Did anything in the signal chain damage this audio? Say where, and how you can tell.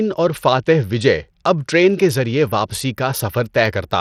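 Yes: throughout the speech, treble flickers and drops out under gritty aliasing. That points to the codec stage, likely Bluetooth SBC compression with a bit pool that fits about 80 kbps.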